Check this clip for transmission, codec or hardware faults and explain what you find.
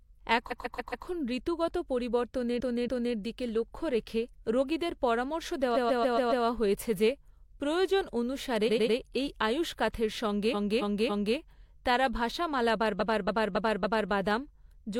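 The speech has a clear transmission fault: repeated frames, in six places, at 0.47–1.03 s, 2.56–3.12 s, 5.72–6.41 s, 8.64–8.92 s, 10.50–11.34 s and 12.96–14.08 s. A short run of compressed frames got delivered more than once, so the decoder plays the same slice again. Here the repeated block is about 139 ms in the first and third stretches, 93 ms at 8.64 s and 279 ms in the others, looped two to five extra times, so you hear a rhythmic stutter and the audio runs long by that amount.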